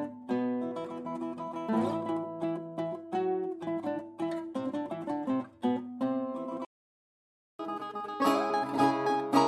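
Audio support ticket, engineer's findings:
Playback stall, 6.65 to 7.59 s: music cuts to silence mid-phrase for about 0.94 s, then resumes. Likely a player buffer underrun or blocked audio thread starving the output.

Catch-up at higher speed, 7.59 s to end of clip: music runs 1.25x fast, pitch raised about four semitones. Player resampling its backlog to recover the lost time. Still sped up when the clip ends; return to normal rate not heard.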